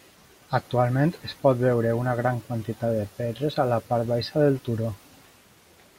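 No technical faults can be heard anywhere in the recording, and the signal stays continuous and steady throughout.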